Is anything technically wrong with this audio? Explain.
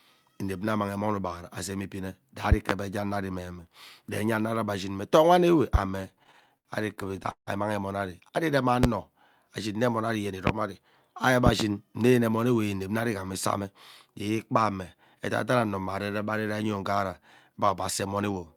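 Yes, there are two problems: a series of loud pops and a stretch of stutter.

The loud pops come at 2.52 to 2.73 s (a double, right after "ugbaghara azem ibine" and just before "enya ano ari meme"), 5.74 s, 8.83 s (after "ari irem"), 10.47 s, and a second double at 11.47 to 11.63 s. Each jumps about 20 to 25 dB above the speech, which carries on underneath. That sharp thump is most likely a voltage spike, such as a plug, switch, static or driver glitch, that got shaped by the downstream circuitry.

The repeated stalls (stutter) run from 5.97 to 7.49 s, right after the 5.74 s pop. The stream kept starving the jitter buffer, so the receiver held and stretched the last bit of sound about eighteen times. The longest hold was 162 ms, with the sound fading during the longer waits. Nothing is actually lost, but roughly 390 ms of filler, about a quarter of that span, makes the speech drag and hiccup.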